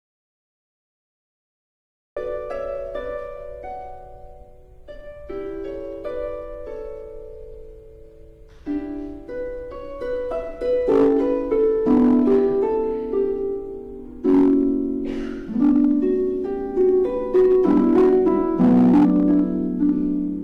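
The audio opens in silence until 2.17 s, with no room tone, an audio dropout to silence likely caused by a lost input. Hard clipping follows at 10.89, 11.53, 14.28, 15.62, 16.81, 17.35 and 19.83 s. Peaks are driven about 1 to 8 dB past the limit and cut flat. The worst stretch runs from 17.35 to 19.40 s.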